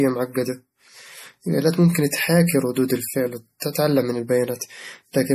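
The whole clip carries plainly audible MP3 compression damage. The top end stops dead at about 15.1 kHz, and the sibilants and breathy edges have that watery, swirling quality, with weak detail flickering in and out between frames. That's the likely result of an encoder starved for bits, cutting the treble and dropping faint frequency lines to save space. The amount of damage fits a low bitrate, somewhere around 40 kbps.

At 3.60 to 3.62 s there's a pre-echo, a brief hiss of about 22 ms smeared just ahead of a sharp onset in the speech. The codec spread its quantisation noise across the whole transform block. Since the attack landed late in that block, noise meant to hide under the loud part leaked into the quiet moment before it. The result is a soft, blurred attack with a hiss leading into it.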